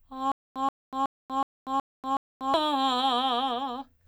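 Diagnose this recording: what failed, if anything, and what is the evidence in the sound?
The music hangs up from about 0.32 s to 2.54 s with a stutter with silent gaps: a roughly 130 ms burst plays, then about 240 ms of dead digital silence, repeating every 370 ms or so, six times over. That's the playback or streaming stage, likely a stalled player retrying and replaying its last buffered chunk before running dry each time. Whatever music belonged in that stretch never gets heard.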